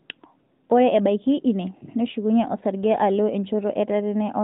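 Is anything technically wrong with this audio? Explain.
No, nothing is technically wrong: the speech has the band-limited, slightly synthetic character of an AMR narrowband mobile codec path working as intended, with nothing beyond what that path normally imposes.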